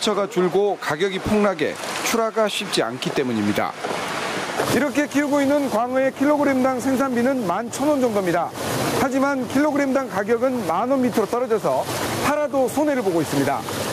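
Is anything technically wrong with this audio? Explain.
Yes. Gain pumping runs through the whole clip. The gain ducks by roughly 10 dB under every loud sound. The level feels squashed. The likely cause is input gain set far too high, with a fast limiter clamping it.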